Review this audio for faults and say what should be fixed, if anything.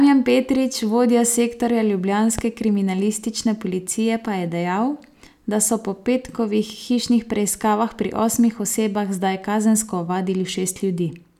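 A loud pop lands at 2.39 to 2.42 s, a single sharp thump standing around 10 dB above the speech, which carries on unbroken beneath it. That continuity separates it from a dropout or splice, where the sound itself would be interrupted. The likely cause is a voltage step, such as a plug, switch or static discharge, shaped by the following circuitry into a short pulse. Secure connections and mute or ground equipment before switching during recording.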